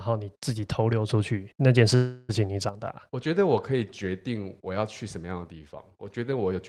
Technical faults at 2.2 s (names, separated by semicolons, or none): sudden gain jump; call audio freeze